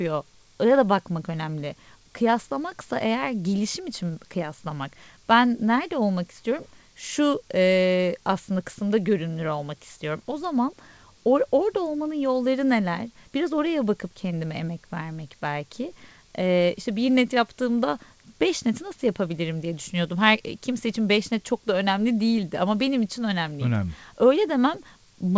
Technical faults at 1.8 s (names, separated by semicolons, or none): none